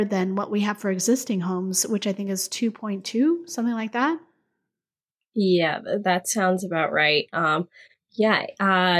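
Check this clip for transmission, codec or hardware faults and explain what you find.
Nothing wrong can be heard in this speech recording.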